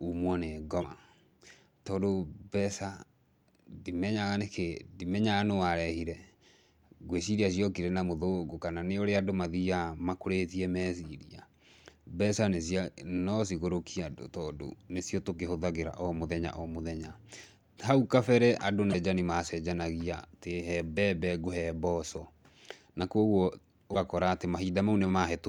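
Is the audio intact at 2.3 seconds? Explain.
Yes, the speech at 2.3 seconds plays through cleanly, with no dropout, click, distortion or other fault at that point.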